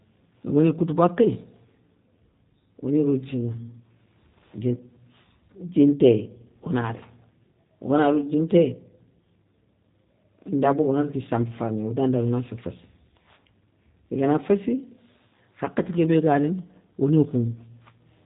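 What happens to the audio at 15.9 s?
At 15.9 s, as throughout the clip, the speech passes through a G.729 codec that rebuilds each 10 ms frame from a vocal tract model and a few excitation pulses, which fits an 8 kbit/s VoIP link. Nothing above 3.8 kHz survives, so the speech sounds muffled, coarse and audibly synthetic.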